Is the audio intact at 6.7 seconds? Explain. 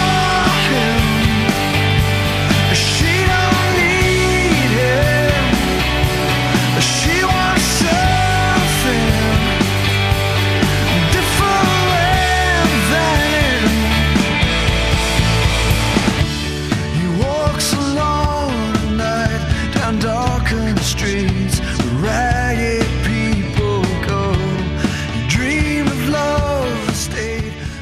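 Yes, at 6.7 seconds the audio runs continuously, with no dropout, click, glitch or other fault at that point.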